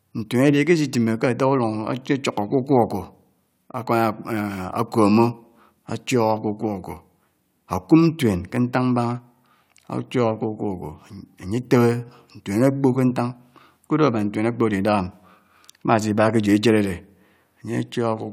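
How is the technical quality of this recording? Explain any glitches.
No technical glitches can be heard anywhere in this speech recording. There is nothing to explain.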